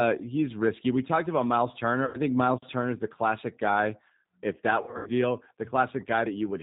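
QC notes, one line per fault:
Throughout: G.729 codec. Everything above 4 kHz is gone, and the speech sounds slightly rough and synthetic because it's rebuilt from a vocal tract filter, a pitch predictor and a few pulses per frame. The damage is plainly audible, which fits an 8 kbit/s stream.
2.05–2.20 s and 4.82–5.10 s: VoIP packet loss concealed by the speech codec. The decoder filled in about 90 ms of missing audio in the first gap, which fits three lost packets. In the second it filled in 180 ms scattered over 240 ms, with the longest stretch 90 ms. Each time it repeated its last pitch and filter with falling gain, so the sound smears into a fading buzzy tone or coloured noise, and it stays weak after audio returns.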